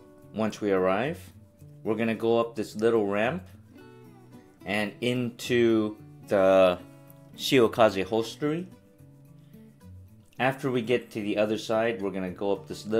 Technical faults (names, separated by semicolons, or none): none